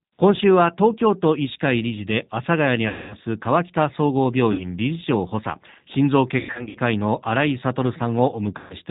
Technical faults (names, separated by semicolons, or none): G.729 codec; VoIP packet loss concealed by the speech codec